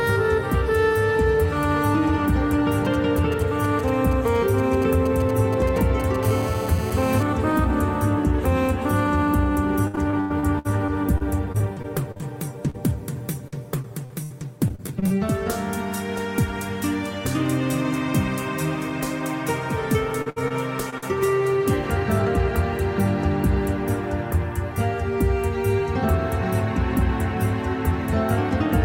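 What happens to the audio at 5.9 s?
GSM signalling bursts run from 2.85 to 6.16 s. A nearby 2G phone's pulses, rectified by the circuit, produce galloping ticks and a 217 Hz buzz.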